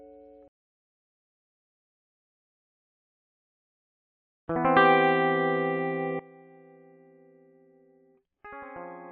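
From 6.19 s to the end at 9.11 s, one channel was likely inverted, its polarity reversed so anything common to both channels cancels when summed to mono. The music falls by about 20 dB, leaving only a faint, hollow trace of the inter-channel differences.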